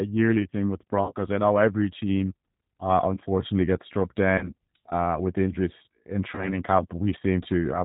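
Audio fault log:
throughout: G.729 codec. The speech was carried through a low-rate CELP coder, which fits an 8 kbit/s G.729A stream, that rebuilds each short frame from a vocal tract filter, a pitch predictor and a few pulses instead of sending the waveform. Nothing above 4 kHz survives, so the sound is dull and band-limited. The coarse pulse modelling leaves a plainly audible rough, synthetic edge on every syllable.
1.06–1.13 s, 4.38–4.52 s, 6.35–6.60 s: VoIP packet loss concealed by the speech codec. Each time about 30 ms of audio went missing, which points to a single lost packet. The decoder filled the gap by repeating its last pitch and filter with falling gain. The result is a brief stretched, fading stretch after "yearly thing with" and before "I know every team", after "uh unfortunately gets struck" and before "uh with injuries in", and after "uh with injuries in". Because each frame builds on the last, the weakened, distorted sound lasts well beyond the 30 ms gap, up to about a quarter second in the last event.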